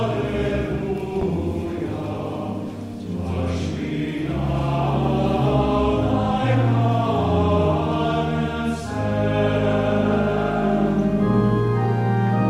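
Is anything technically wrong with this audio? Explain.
Yes. A loud pop occurs from 1.21 to 1.25 s. A sudden voltage pulse, likely from a plug, switch or static discharge, was added to the signal. It is heard as a single sharp pop, about 10 dB above the sound, which continues underneath.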